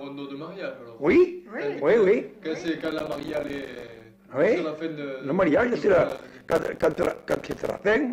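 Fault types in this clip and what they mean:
Processor overload crackle: from 2.68 to 4.06 s and 6.09 to 7.79 s, the processor misses buffer after buffer, each around 5 ms, and every miss leaves a hard-edged gap of silence, so the sound breaks into gritty crackle until the load eases.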